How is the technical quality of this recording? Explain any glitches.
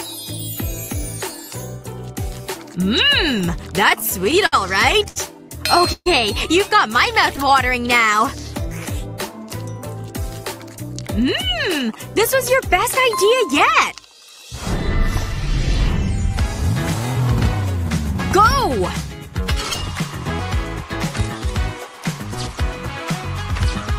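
The recording suffers from network timing problems that disturb its pacing three times, though the stalls themselves lose no audio.

From 3.89 to 6.08 s there are repeated stalls (stutter). Packets arrived late, so the jitter buffer ran dry nine times and the receiver stretched the last sound to cover each wait, the longest lasting 134 ms. About 15% of that stretch is filled-in audio, so it drags and stutters.

From 7.44 to 8.17 s there is a jitter buffer slow-down. With its reserve running low, the receiver repeated single pitch periods to rebuild it, adding 46 ms. The audio plays at 94% speed with unchanged pitch, so sounds come out slightly drawn out.

From 11.07 to 14.51 s there is a jitter buffer speed-up. The buffer held more than its target, so the receiver trimmed short pitch-period slices, around 200 ms in total. The audio runs at 106% speed at the same pitch and sounds somewhat hurried.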